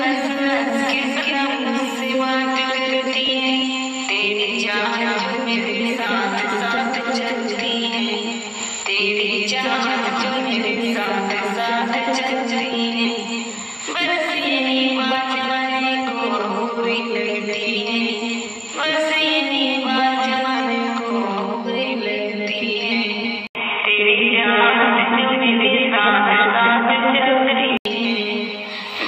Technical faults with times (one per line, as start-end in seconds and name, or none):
23.47-27.85 input switched to a poorer device